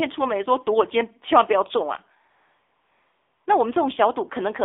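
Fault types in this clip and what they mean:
AMR narrowband mobile codec: The voice has passed through the 2G/3G mobile speech codec, which rebuilds speech from a vocal-tract model excited by sparse pulses, here at 7.4 kbps. Nothing above about 3.6 kHz survives and the low end thins below 300 Hz, and the low bitrate gives a plainly buzzy, synthetic edge. A simple telephone band-limit would narrow the sound without adding that artificial buzz.
AMR comfort noise: From 2.30 s to 3.46 s, about 1.16 s, the phone treated the talker as silent and stopped sending speech frames. The receiver filled the gap with generated noise. The real background drops out and a smooth, steady hiss switches in, then switches off when speech returns. A dropout would leave dead silence or a glitch instead of this even, artificial-sounding noise.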